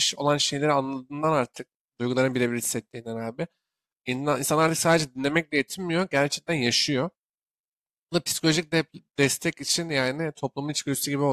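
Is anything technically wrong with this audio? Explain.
No, no technical faults.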